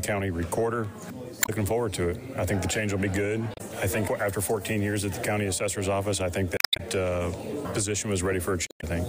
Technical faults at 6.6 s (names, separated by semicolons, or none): damaged data in a compressed stream